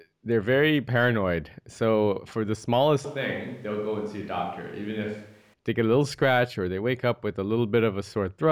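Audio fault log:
3.05–5.54 s switch to a distant microphone: after "for the" the speech abruptly turns hollow, roomy and thin in the bass, about 5 dB quieter over more room noise, likely because a farther microphone took over; the equally sudden return before "they get a little" rules out a gradual fade.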